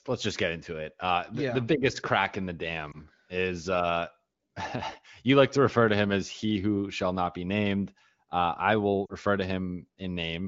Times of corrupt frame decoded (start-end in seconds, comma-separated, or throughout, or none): none